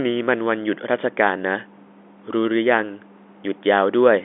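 Nothing faulty can be heard anywhere in this speech.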